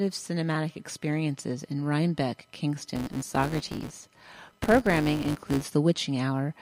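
From 2.96 s to 5.70 s a buzz at 200 Hz sits on the sound, rising and falling with its level. This is a filter restarted on every block: it drops its state each time and starts from silence, so a small transient marks every block boundary, pointing to blocks about 5 ms long.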